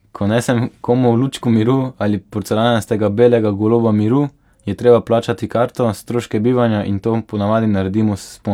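Listening closely to the speech, nothing stood out as a technical problem at any point.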